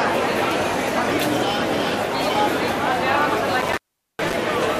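There's an intermittent contact problem from about 3.61 to 4.35 s. A loose cable or plug opens briefly, so the audio drops out for roughly 416 ms, with crackle at the edges and faint hiss while the connection is open.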